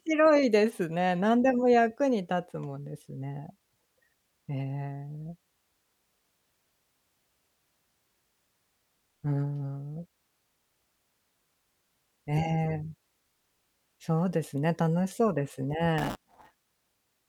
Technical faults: buffer tearing

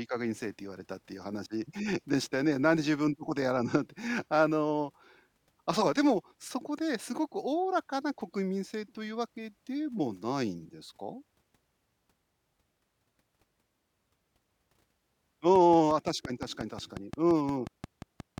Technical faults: train of clicks

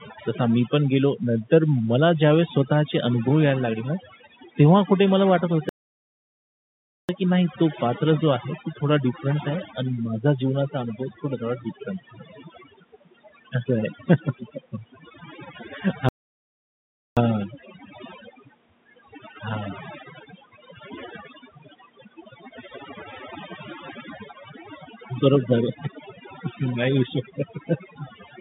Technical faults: overdone noise removal; playback stall

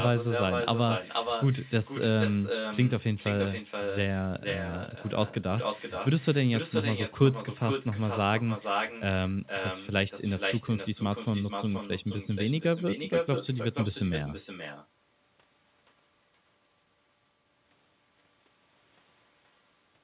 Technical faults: echo with no canceller

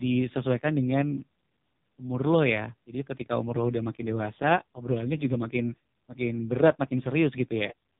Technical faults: AMR narrowband mobile codec

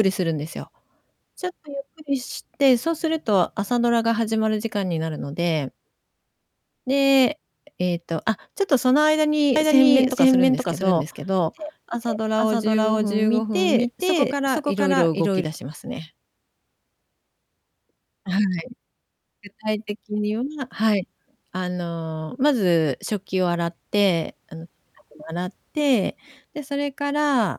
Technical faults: doubled audio track

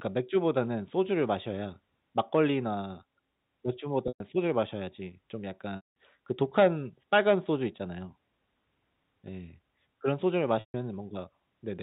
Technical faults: packet loss with pitch repetition

